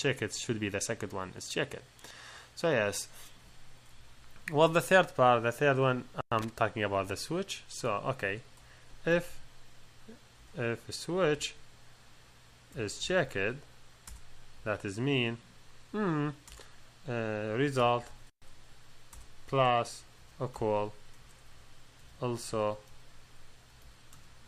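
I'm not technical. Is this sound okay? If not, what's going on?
No. At about 6.39 s there is a short, rough burst of crackle lasting roughly a tenth of a second, ending near 6.49 s. This is loose connector crackle: somewhere in the cable or plug chain, a worn or dirty contact briefly lost and regained its connection, chopping the signal on and off very quickly and producing that scratchy, irregular noise. Reseating or cleaning the connector, or swapping the cable, is the usual fix.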